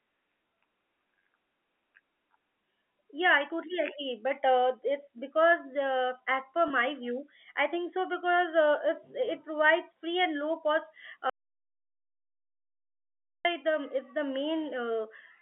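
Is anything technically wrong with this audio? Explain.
Yes. From 6.68 to 6.70 s, between "uh as per" and "view I think so", a brief held, slightly buzzy moment replaces the sound. This is packet loss with pitch repetition: a 20 ms gap, consistent with one lost packet, was bridged by repeating the last pitch period.

After "free and low cost", at 11.30 s, the speech cuts abruptly to silence, with no room tone, until 13.45 s. This audio dropout to silence lasts about 2.15 s. A likely cause is a lost input link, leaving silence written in its place.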